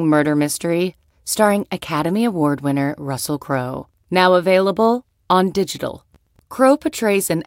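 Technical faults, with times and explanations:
No technical faults turn up anywhere in this speech recording, so there's nothing here to flag.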